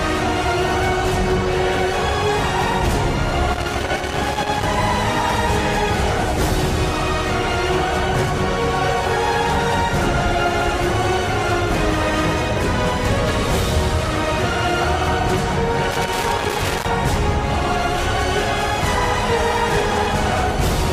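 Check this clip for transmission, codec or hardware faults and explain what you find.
There's a hardware problem here: loose connector crackle, showing up twice, from about 3.53 to 4.63 s and again from 15.91 to 16.85 s, roughly a second each time. What's going on is a worn or dirty contact that keeps making and breaking as the plug shifts, so the signal gets chopped up and any DC sitting on the line turns into pops. You hear it as ragged, irregular scratchy crackle laid over the sound.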